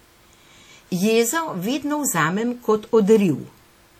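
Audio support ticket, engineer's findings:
WMA compression, throughout. Speech sounds ringing and washy, hiss breathing with level; likely a transform codec around 48 kbps smearing quantisation noise over long blocks, dropping weak spectral lines.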